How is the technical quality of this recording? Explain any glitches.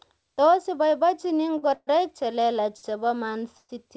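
The recording has four brief timing glitches of two kinds, heard over a call-codec band that stops at 8 kHz, consistent with wideband G.722.

Short stalls from a late packet occur at 1.58 to 1.64 s, just before "che lelach chebo", and at 2.77 to 2.85 s, just after "che lelach". Each time a packet arrived late, so the receiver stretched the last sound for 40 ms and 61 ms, and the speech resumed intact.

Call audio freezes occur at 1.74 to 1.89 s and at 3.57 to 3.71 s, the second just after "che lelach chebo". Packets were likely held up in transit, and the receiver continued the last sound as a fading buzz or hiss for 130 ms and 117 ms. These are longer than the stalls and decay into silence, about 50 ms and 40 ms, before the speech continues.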